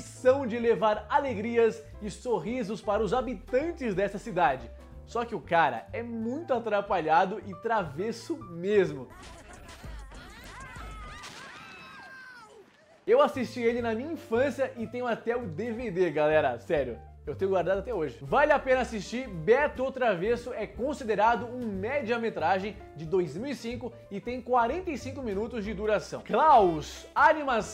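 No technical faults can be heard anywhere in the recording. Nothing in the audio calls for a timestamp or a description of a problem.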